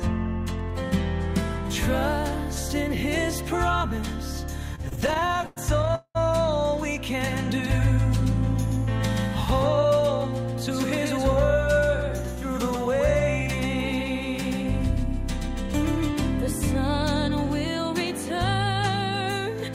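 From 4.75 to 6.17 s there are repeated stalls (stutter): about twenty brief holds, longest 197 ms, where the jitter buffer ran dry and concealment stretched the sound. From 7.21 to 16.09 s a doubled audio track appears: a dry copy, roughly 150 ms late and about 5 dB down, likely from a second capture path, starting and stopping abruptly.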